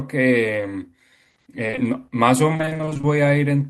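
At 1.67, 1.71 and 1.75 s, three short concealed packet losses fall back to back, each hiding about 20 ms of the speech. The receiver patched each hole by extending the last sound and then blended back into real audio, so the stretch up to 1.79 s comes across as one brief smear or wobble. Because this is a single isolated cluster, it does not have the persistent chopping of the later fault.

From 2.53 to 3.05 s comes repeated packet loss with robotic sound. About a dozen separate holes, none longer than 20 ms (which fits 20 ms packets), recur throughout this half-second, so roughly half of it is synthesized fill rather than real audio. Each patch has barely blended back before the next gap arrives. The result is choppy speech with pieces missing. It sounds like ongoing degradation, not a single glitch.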